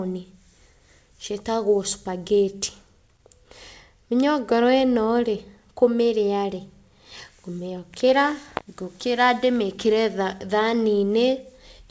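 Nothing faulty can be heard anywhere in this speech.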